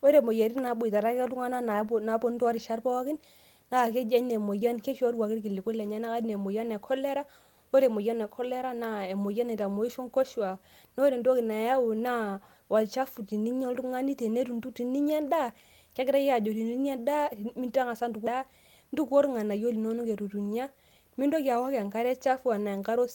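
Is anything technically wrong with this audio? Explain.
Yes. From 4.59 to 4.70 s, short concealed packet loss: about 20 ms never arrived, and the decoder extrapolated the preceding sound, causing a brief smear that shows as a smoothed, blurred spectrogram patch.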